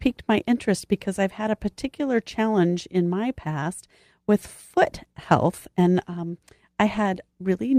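Clock drift between sender and receiver runs through the whole clip: the sender's clock is about 3% slower than the receiver's, so the jitter buffer keeps draining and the receiver has to pad out the speech to avoid running empty. From 0.25 s to 7.71 s, repeated timing corrections stretch the speech to 97% speed. Short segments are repeated at uneven intervals, all lengthening the audio and adding around 200 ms in total. If heard at all, they come through as slight hiccups and a faintly unsteady, dragging pace.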